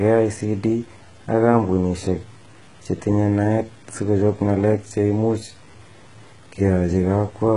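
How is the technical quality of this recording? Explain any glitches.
The technical quality is poor, with two faults running through the whole speech clip.

Throughout, quiet passages sound gritty and grainy, with noise roughly 35 dB below the speech. The likely cause is low bit depth without dither: truncation to what sounds like 8 bits leaves a rounding error that follows the signal.

Also throughout, s sounds and treble are metallic and lispy, with nothing above 11 kHz. This heavy damage likely comes from HE-AAC compression, consistent with a bitrate near 12 kbps, where the upper band is rebuilt by copying lower bands upward, so the harmonics no longer line up.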